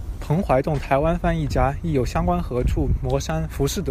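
No technical faults can be heard anywhere in the recording, and the signal stays steady and intact throughout.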